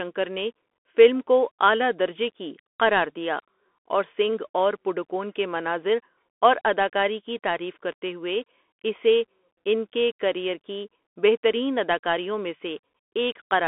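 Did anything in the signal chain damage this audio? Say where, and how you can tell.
Yes. A Bluetooth CVSD headset codec is audible for the whole clip, at the codec stage. The speech is confined to a telephone band of roughly 250 Hz to 3.5 kHz, with nothing above 3.8 kHz. A granular hiss sits under the voice, and s sounds turn scratchy. CVSD sends one bit per sample saying only up or down, with an adapting step size, consistent with a 64 kbps Bluetooth voice link. Sharp, loud high content outruns that step and distorts.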